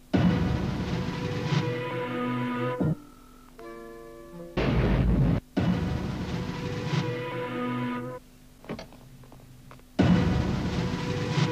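No technical faults are audible.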